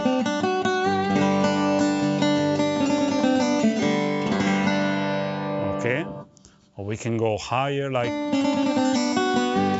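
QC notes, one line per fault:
No faults found on listening.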